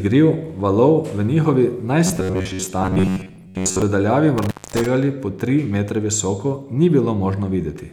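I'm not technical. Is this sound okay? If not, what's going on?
No. From 2.07 to 3.82 s the voice turns into a rigid, metallic buzz at about 94 Hz: robotic sound from repeated short buffers, likely caused by reusing roughly 11 ms slices while most of the real audio is skipped. At 4.38 to 4.86 s an intermittent contact, meaning a loose cable or plug, cuts the sound out for about 0.23 s, with crackle at each edge.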